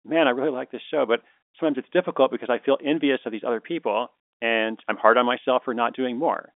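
Nothing goes wrong anywhere in this bit of speech; it just has the narrow, boxed-in sound of an ordinary phone line, with the top end stopping around 3.5 kHz.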